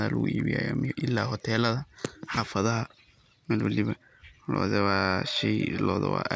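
From start to end, the speech carries a steady buzz. It is a resampler restarted on every block. Each 50 ms block was converted on its own, likely from 24 kHz down to 16 kHz. At every block edge the converter lacked the true neighbouring samples. So each edge gets a small error. These errors repeat 20 times a second. They fuse into a rough ticking buzz at 20 Hz. It rides on the speech and drops away in pauses.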